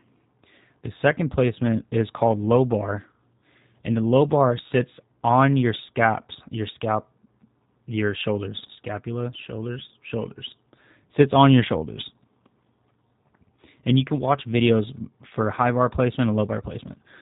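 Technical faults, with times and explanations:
Throughout, G.729 codec. The speech has been squeezed through a low-rate VoIP coder, and the damage is plainly audible. Nothing above 4 kHz survives, so the sound is narrow and muffled. The coder does not keep the waveform. It rebuilds each 10 ms frame from a vocal tract filter, a pitch estimate and a few pulses. That gives the voice a rough, slightly synthetic edge, which fits an 8 kbit/s stream.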